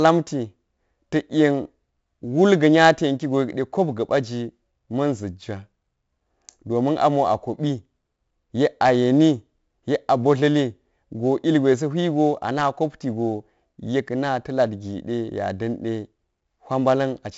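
From start to finish the speech carries 4-bit ADPCM compression, heavily. Each sample is coded as a coarse step from a predicted value, so a gritty hiss rides on every loud syllable and sharp onsets distort where the step size lags behind. Nothing survives above 7.7 kHz, which fits a 16 kHz sample rate at 64 kbps. A spectrogram shows a hard ceiling there and a noise haze that swells and fades with the speech level.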